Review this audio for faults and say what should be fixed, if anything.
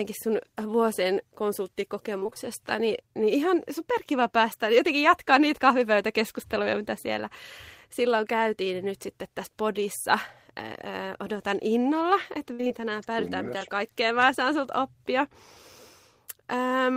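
Repeated packet loss (robotic sound) occurs at 2.19–2.38 s, before "niin niin ihan superkiva", and at 12.53–12.81 s, after "odotan innolla että". Several gaps, up to 59 ms, are patched by repeating the last sound. Speech turns choppy. A larger jitter buffer would prevent this.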